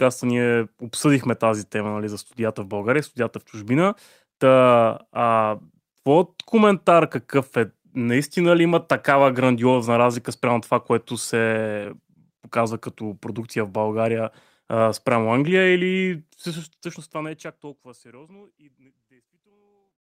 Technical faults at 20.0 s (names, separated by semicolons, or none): none